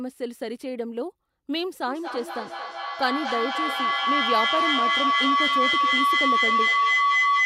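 At 1.87 s a feedback howl begins and runs to the end of the clip. Sound from a loudspeaker is reaching a microphone on the same call and going round again. Each pass comes back louder, not quieter. The repeats narrow to a single tone near 1 kHz. Each trip round the loop takes roughly a fifth of a second. At its peak it sits about 6 dB above the speech.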